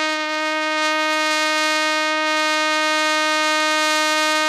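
HE-AAC compression damage runs through the whole music clip: the treble sounds bright but synthetic, with cymbals and sibilant edges turned gritty and metallic. That points to spectral band replication rebuilding the top end from copied lower bands, likely from HE-AAC coding at a low bitrate around 24 kbps.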